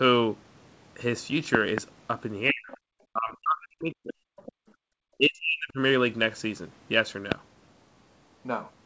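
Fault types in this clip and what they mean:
Loud pop: A sharp pulse sits on top of the speech, which carries on underneath. Two pops come in quick succession between 1.55 and 1.80 s, and a single one falls at 7.32 to 7.34 s, each peaking about 20 dB above the speech. The cause is likely a sudden voltage step from a plug, switch, static or driver glitch. Unlike the dropouts elsewhere, nothing is removed: a transient is added.
Speech suppressed in double talk: The talker's own voice sinks, by as much as about 40 dB, at 2.51 to 2.71 s, 3.11 to 4.17 s and 5.17 to 5.78 s. The longest stretch lasts about a second. This is likely an echo canceller that could not tell the near voice from loudspeaker echo while both sides spoke, and turned everything down. What distinguishes it from background gating is that the speech itself dips, not just the room tone.
Other side's voice leaking through: A second, fainter voice intrudes briefly. 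It appears at 2.71 to 2.77 s, about 25 dB below the main speech, and again at 4.36 to 4.52 s, about 20 dB below. It is likely loudspeaker playback that the echo canceller failed to remove fully from the microphone. Unlike a pop or a dropout, this is extra voiced sound from another talker layered into the clip.
Background gated by the echo canceller: Right after the second leak, from 4.52 to 4.89 s, the room sound falls away by about 37 dB for roughly 400 ms, then returns. The echo canceller clamped the microphone hard while the loudspeaker was active and released it afterwards. It differs from double-talk suppression because the hole is in the background, and the ambience is what disappears, not the talker's voice.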